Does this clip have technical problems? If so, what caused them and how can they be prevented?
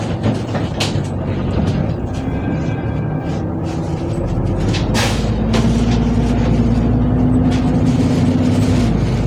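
No, there are no technical problems in this audio.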